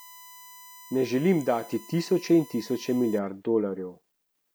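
From the start to 3.19 s, a steady 1 kHz USB whine sits about 25 dB under the speech, as 1 ms bus frames leak through the power or ground, drawing a flat horizontal spectrogram line.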